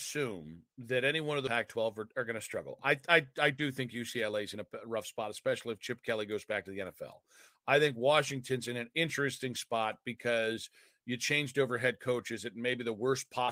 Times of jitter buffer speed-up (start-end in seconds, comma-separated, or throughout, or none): 1.57-2.60, 3.24-5.24